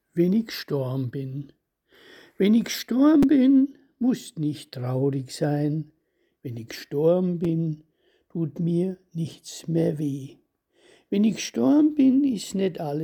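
Repeated buffer at 3.23 s and 7.45 s: late audio made the device replay a tiny 5.33 ms block, which fits a 256-sample buffer. It plays twice more, then once more, giving brief clicks and losing roughly 10 ms and 5 ms.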